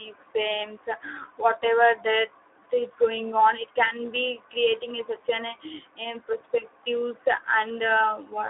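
Speex codec damage runs through the whole clip. This CELP speech coder has too few bits to describe the excitation, so the speech comes out noisy and hoarse. The degree of roughness points to a low setting of around 11 kbps. The sound is also confined to a telephone band of 300 Hz to 3.5 kHz, which leaves it thin, boxy and without low body or upper air.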